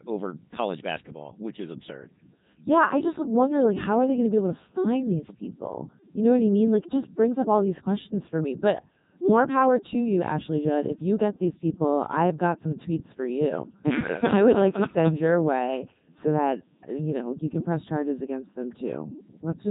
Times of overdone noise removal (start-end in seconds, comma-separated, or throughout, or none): none